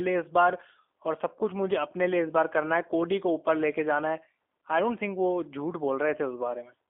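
From start to finish the speech sounds thin, boxed-in and faintly rough, with a buzzy, synthetic edge that is plainly audible. Nothing comes through above about 3.5 kHz or below about 250 Hz. This is G.729 codec damage, consistent with the G.729A variant at 8 kbit/s. The codec discards the waveform and rebuilds each 10 ms frame from a vocal tract filter, a pitch predictor and a few coded pulses, so fine detail is replaced by an approximation.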